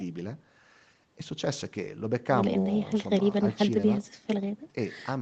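The speech carries no audible technical faults.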